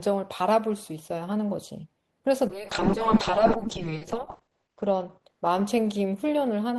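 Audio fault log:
2.51 to 6.49 s: call bitrate drop. The speech turns rough and muffled. The encoder was starved of bits, which fits a fall from about 32 kbps to about 6 kbps. Content above 8 kHz disappears, where it reached 20 kHz before. The coarsest stretch lasts 1.66 s.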